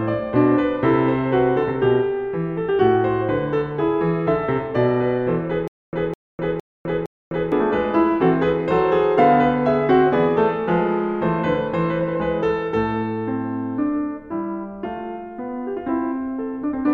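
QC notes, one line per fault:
5.68–7.52 s stutter with silent gaps: a 208 ms fragment of the music repeats four times, each followed by 253 ms of digital silence on a steady 461 ms cycle, likely from a stalled stream replaying its last buffer. Identical waveform blocks alternate with flat, empty spectrogram bands.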